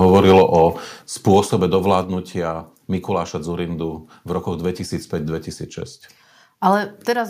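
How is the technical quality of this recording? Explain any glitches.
The recording has audible level problems: harsh clipping early on and several abrupt drops in loudness.

Microphone overload occurs from 0.02 to 0.62 s and again from 1.28 to 1.4 s. The speech peaks land harsh and crackly. The likely cause is input volume set too high, pushing peaks about 4 dB past the converter's limit in the first stretch and about 1 dB in the second, so their tops get sliced off. A few percent of samples are flattened in the first burst and a smaller share in the second. On a waveform these show as flat-topped plateaus. A spectrogram shows a spray of broadband harmonic energy above the speech.

The microphone volume stepped down at 1.02 s, 2.04 s and 7.14 s. Each time, speech and background fall together in a single step, by about 5 dB at the first two points and about 2 dB at the last. This is likely the call software's automatic gain control reacting to a microphone it judged too loud or clipping and trimming the device's input level. 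A waveform shows the envelope shrinking abruptly at each point, like a staircase. On a spectrogram, every frequency band dims at the same instant.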